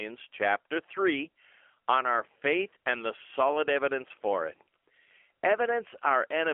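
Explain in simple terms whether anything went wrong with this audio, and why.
The whole clip has gone through AMR narrowband mobile codec squeezing, like an old phone call. Everything above about 3.4 kHz and below 300 Hz is gone, and at this low-quality setting the speech comes out noticeably buzzy and synthetic from start to finish.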